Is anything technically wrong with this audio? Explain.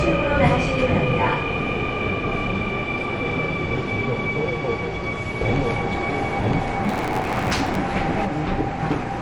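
Yes, there are three problems.

Throughout, the audio is dull, and it has a plainly audible gurgling, granular texture. The likely cause is MP2 compression at a low rate, around 48 kbps. Starved of bits, Layer II drops whole upper sub-bands and quantises the rest coarsely. That gives band-wise flicker rather than the watery swirl of MP3.

From 5.41 to 8.25 s, the audio is doubled. A full-band copy at about the same level runs roughly one second behind. This is likely a doubled audio track from a second capture path or a misaligned edit. Unlike an echo or reverb, the copy has no decay or room colour, and it starts and stops abruptly.

From 6.84 to 7.76 s, a buzz at 91.9 Hz appears and the sound runs 1.07 times fast. This is a block size mismatch (truncated), which fits 512-sample blocks being written while the next stage reads fewer and discards each block's tail. Pitch stays about normal, which distinguishes it from a sample-rate error.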